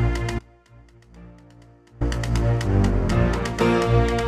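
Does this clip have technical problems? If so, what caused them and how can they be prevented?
Yes: an audio dropout to a faint residue runs from 0.39 to 2.01 s, leaving only a faint leak roughly 25 dB down, likely an upstream signal loss with the path still live. Secure cables and connectors, and monitor the input during capture.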